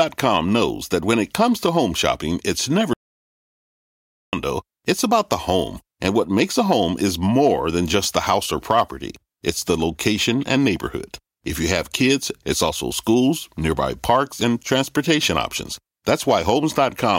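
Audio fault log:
2.93 to 4.33 s, audio dropout to silence: after "home shopping it's never" everything drops to silence with no room tone until "it's about", likely from a lost input while recording continued.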